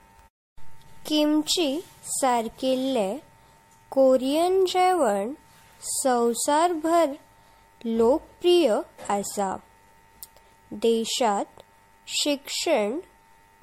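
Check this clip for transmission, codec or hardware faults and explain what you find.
The speech shows one codec fault, present throughout. Generation loss is audible from start to finish: smeared, swirly, hollow speech with blurred consonant attacks. The likely cause is repeated lossy MP3 encoding at around 62 kbit/s, roughly five passes. Each pass requantises on a shifted frame grid and compounds the noise and spectral holes. A spectrogram would show a hard ceiling near 16.5 kHz, patchy gaps between harmonics, and softened onsets in the waveform.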